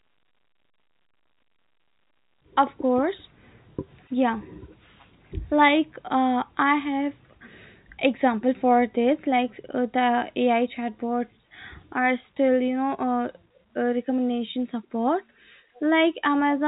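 Nothing technically wrong turns up in this speech clip; it's simply telephone-band audio carried over G.711 A-law at 64 kbps, with nothing above roughly 3.8 kHz and at most a faint trace of coding grain.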